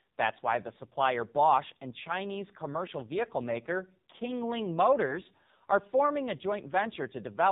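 The clip is speech carried through the AMR narrowband mobile codec, the 2G and 3G phone codec. Nothing above 4 kHz survives, so the sound is thin and boxy. The codec rebuilds the voice from a vocal tract model fed by a few pulses per short sub-frame. Here the damage is heavy. The voice sounds buzzy and synthetic throughout, which fits one of the lowest AMR modes, near 5.9 kbps. There are lost AMR speech frames from about 5.06 to 5.16 s, just before "are forming a". The decoder reused its last good pitch and vocal tract settings at reduced gain, so the sound briefly dips and warbles. The voice then comes back rough for a moment. The short disturbance fits a single lost 20 ms frame that failed its checksum after radio errors.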